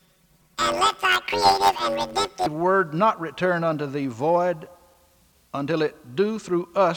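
From the start to about 2.46 s the audio has a robotic buzz near 94 Hz with no clear octave shift, the mark of planar audio read as interleaved. Each block stores all left samples and then all right ones, but is played as alternating pairs, so each block runs twice at double speed. The blocks are about 10.67 ms long, which fits a 512-sample block. A spectrogram would show dense harmonic striping spaced at that rate.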